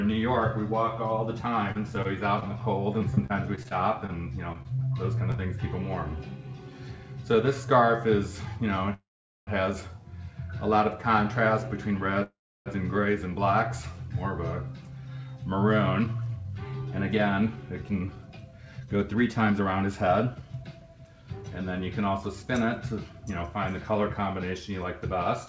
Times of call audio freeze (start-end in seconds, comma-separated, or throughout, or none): 8.94-9.49, 12.23-12.68